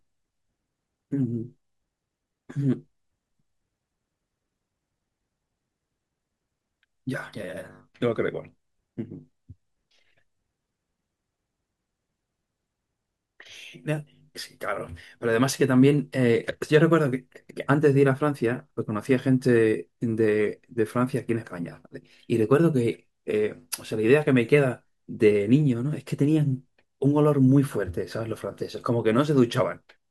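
No technical faults can be heard anywhere in the recording.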